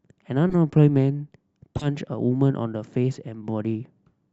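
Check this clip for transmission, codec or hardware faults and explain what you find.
Two short glitches stand out, both a corrupt frame decoded. The first runs from 0.49 to 0.55 s, the second from 1.77 to 1.88 s, and the second is clearly louder. In each case a few compressed frames of the speech arrived with flipped bits, and the decoder played them anyway, so misread gains and codes dropped energy into the wrong frequency bands. You hear a brief chirpy, noisy blip that lasts roughly as long as the damaged frames.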